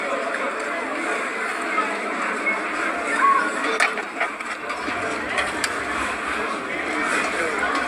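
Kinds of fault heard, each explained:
No faults can be heard anywhere in this audio.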